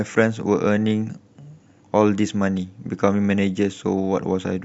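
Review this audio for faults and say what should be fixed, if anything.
No faults; nothing needs fixing.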